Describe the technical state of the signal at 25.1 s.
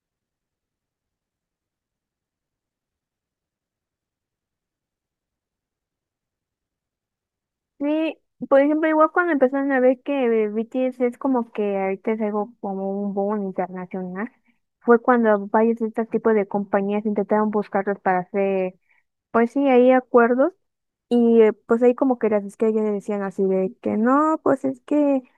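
At 25.1 s the speech signal is intact, with no audible fault at that moment.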